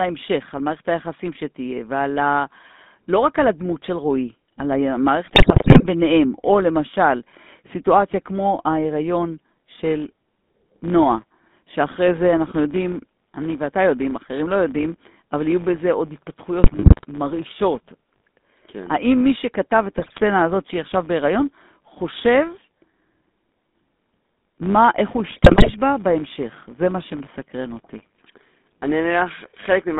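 Throughout, the speech passes through the GSM full-rate codec, consistent with its 13 kbit/s coding. It rebuilds the voice from a vocal-tract filter fed by a sparse pulse excitation, inside a band of roughly 200 Hz to 3.6 kHz. The result is plainly buzzy and gravelly, and the top end is missing.

GSM bit errors then corrupt the decoder's filter, pitch and gain parameters in four bursts: 5.26 to 5.86 s, 16.64 to 17.05 s, 19.98 to 20.19 s, and 25.3 to 25.75 s. During each burst the spectrum warps and the level jumps, so the speech breaks into squawks, pops and gargling.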